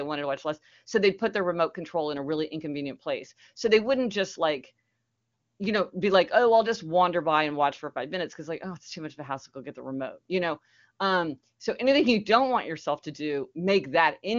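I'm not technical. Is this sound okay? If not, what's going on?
Yes, this sound is okay, with nothing going wrong that needs explaining.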